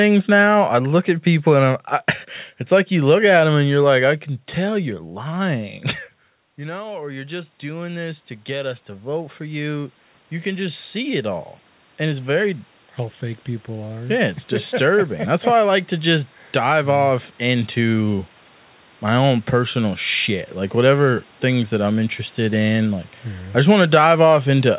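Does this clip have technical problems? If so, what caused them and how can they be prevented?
Yes. Automatic gain rising runs from 4.62 to 15.46 s. The gain control judged the input too quiet and slowly raised its gain by about 16 dB, so the speech and the room noise swell together over roughly ten seconds. Fixing the input level at the microphone, or disabling automatic gain control and setting gain manually, would prevent this.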